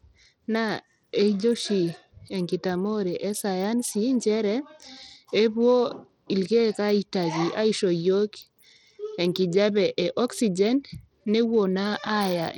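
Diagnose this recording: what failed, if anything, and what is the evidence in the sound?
Throughout the speech the treble is thin and flickers in and out, with a gritty noise and aliasing riding on the sound. That points to the codec stage, likely Bluetooth SBC compression at a low bit pool, roughly 80 kbps. Its few sub-bands starve the top bands of bits and coarsely quantise the rest.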